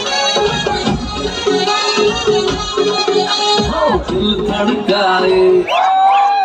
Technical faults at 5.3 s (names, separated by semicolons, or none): none